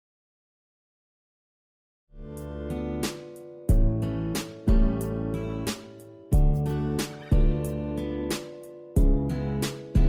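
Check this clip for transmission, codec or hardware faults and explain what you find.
One fault is audible. From 3.57 s to the end, the quality drops abruptly, with more codec artefacts and no gap: an adaptive stream at a lower bitrate, which fits a switch from roughly 64 to 24 kbit/s Opus. The fade-in from around 2 s to 2.73 s is smooth.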